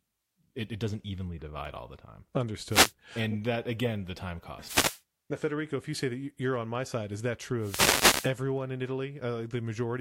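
Bursts of static swish over the speech from 2.68 to 2.93 s after "divide all the time", 4.60 to 5.02 s after "that again the time", and 7.59 to 8.33 s after "my side is that": wireless microphone noise hits, where the FM radio link faded and receiver noise surfaced.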